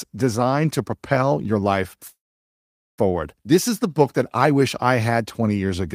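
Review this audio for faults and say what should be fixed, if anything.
A call audio freeze runs from 2.07 s to 3.00 s in this speech. The sound stalls, the last fragment is briefly carried on and fades, and about 0.81 s of near silence follows before the audio resumes exactly where it stopped. Nothing is lost; instead about 0.91 s of gap is inserted and everything after it is delayed by that amount. The likely cause is packets held up in transit, draining the jitter buffer. To prevent it, use an adaptive jitter buffer with enough headroom for network delay spikes.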